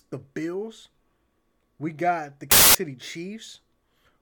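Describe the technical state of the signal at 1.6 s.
At 1.6 s the speech signal is intact, with no audible technical fault.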